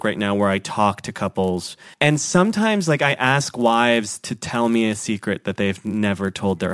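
Speech. A resampler restarted on every 10 ms block during the 48 kHz to 24 kHz conversion leaves an error at each block edge, heard throughout as a 100 Hz buzz whenever speech is present.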